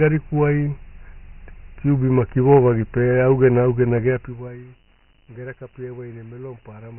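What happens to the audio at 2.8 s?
At 2.8 s the speech sounds thin and muffled, with a gritty hiss clinging to it. That hiss is present through the whole clip rather than appearing at that moment. The cause is Dialogic VOX ADPCM, a telephony codec that stores each sample as a 4-bit difference from a prediction. Here the damage is heavy. Nothing reaches above 3.1 kHz, and the 24 kbps rate fits a 6,000-samples-per-second stream, so quantisation noise rides along with the speech.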